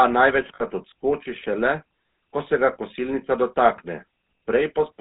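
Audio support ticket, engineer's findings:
GSM full-rate codec, throughout. Buzzy, gravelly speech, plainly audible; nothing above 4 kHz. Vocal-tract model driven by regular pulses, excitation kept at one sample in three. Character fits the 13 kbps full-rate coder somewhere in the call path.

Lost GSM frames, 0.54 to 0.63 s. Short rough, metallic ring where speech should continue. Decoder repeating last good frame's parameters, concealing about 60 ms, consistent with three consecutive 20 ms frames lost.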